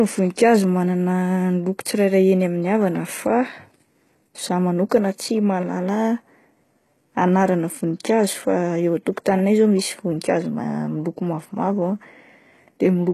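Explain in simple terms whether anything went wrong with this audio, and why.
The recording was most likely squeezed hard by HE-AAC compression, which stores only the lower sounds and fakes the treble by copying them upward. Throughout the speech, s sounds come out gritty and metallic, and nothing survives above about 12.3 kHz.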